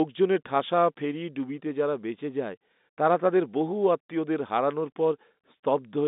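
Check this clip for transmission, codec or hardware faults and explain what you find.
I find no transmission, codec or hardware faults in this speech clip.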